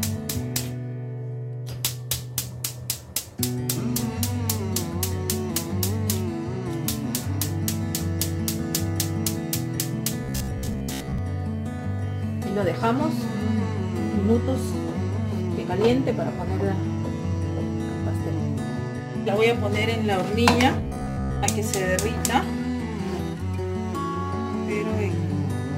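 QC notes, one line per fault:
10.24–11.18 s and 20.81–21.46 s, robotic sound from repeated short buffers: the sound turns into a rigid metallic buzz at 66.7 Hz, likely from a 15 ms chunk being replayed while real audio is skipped, about half the time in the first stretch and most of the second.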